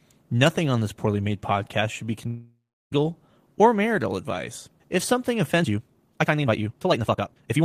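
A long network dropout runs from 2.27 to 2.93 s. The speech stops, and in its place the last sound is drawn out into a fading buzz that thins away, leaving about a third of a second of near-silence before the speech resumes. About 0.64 s of the speech never arrives. The likely cause is a lapse in the network stream, with the receiver's concealment stretching the final fragment until it gives up.

A time-stretched section starts at 5.57 s and runs to the end of the clip. The speech suddenly rushes ahead at roughly 1.89 times its earlier pace, but the pitch stays where it was. Short slices have been dropped to squeeze the audio, so the delivery sounds hurried rather than squeaky. The likely cause is software compressing this stretch to fit a shorter duration while holding the pitch steady.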